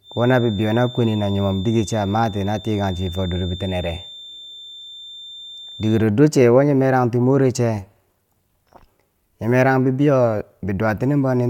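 A loudspeaker-to-microphone loop likely sitting just at the edge of feedback gives this speech recording a feedback whistle from 0.0 to 6.09 s: a thin, steady 3.6 kHz tone around 20 dB below the voice, swelling and fading slowly in level without building up.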